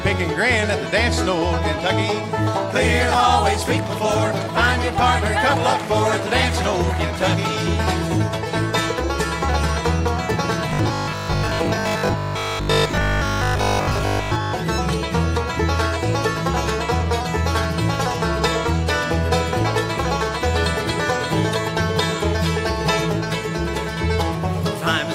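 From about 10.69 s to 14.53 s the sound collapses into robotic sound from repeated short buffers: a stiff, metallic buzz at a fixed 50 Hz that only loosely tracks what was there before. The likely cause is new audio reaching the playback side too slowly, so the software keeps looping a stretch of about 20 ms to fill the gaps. Most of that window is repeats rather than fresh audio, and the looping period sets the 50 Hz drone.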